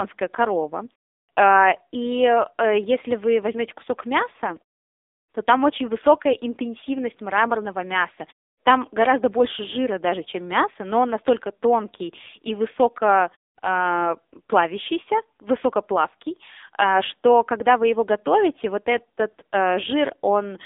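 From start to finish the speech has passed through the AMR narrowband mobile codec, which rebuilds the voice from a vocal-tract model driven by sparse pulses, here at a low bitrate consistent with about 6.7 kbps. The line band runs from 300 Hz to 3.7 kHz, with nothing above 3.7 kHz, so the speech sounds thin and boxed-in. Heavy codec damage makes it buzzy and synthetic. In the pauses, the output falls to silence.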